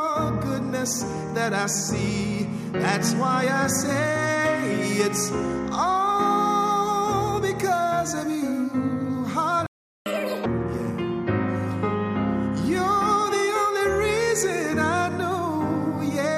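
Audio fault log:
9.66–10.06 s, playback stall: the sound cuts out mid-flow and goes silent for about 0.4 s before resuming where it stopped, likely because the player ran dry of buffered data or its playback thread was blocked and could not feed the output.
10.06–10.46 s, catch-up at higher speed: straight after the gap the audio rushes at double speed, pitched up roughly ten semitones, then snaps back to normal, as the player resamples its backlog faster to win back the time lost in the stall.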